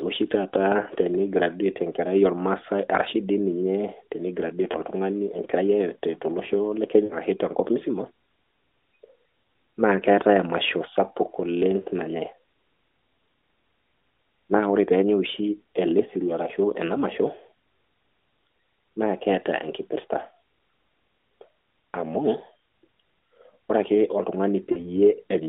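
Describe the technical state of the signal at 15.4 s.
At 15.4 s the signal is intact, with no fault present, only the narrow telephone-band sound of the AMR narrowband mobile codec path carrying the speech as it does throughout.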